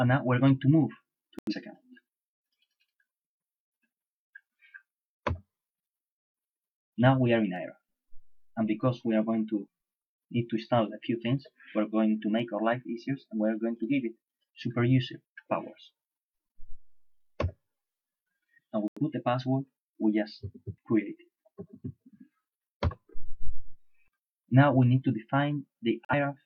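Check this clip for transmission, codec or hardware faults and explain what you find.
Three digital broadcast dropouts occur, at 1.39 to 1.53 s, 18.88 to 19.00 s and 26.05 to 26.14 s. The receiver rejected corrupted frames and muted until clean ones arrived, leaving brief silent holes where 85 ms, 85 ms and 43 ms of audio went missing. That fits two, two and one lost frames.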